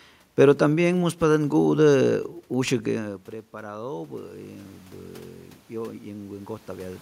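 From 2.53 to 4.39 s there is automatic gain rising. After the input fell by about 17 dB, the gain control climbed about 4 dB over nearly two seconds. The voice and the room noise swell together, unlike the talker's movement around 3 s, which changes only the voice.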